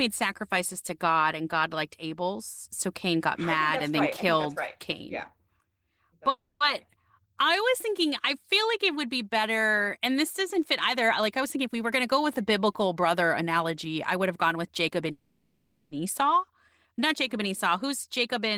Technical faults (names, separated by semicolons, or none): call audio freeze; jitter buffer speed-up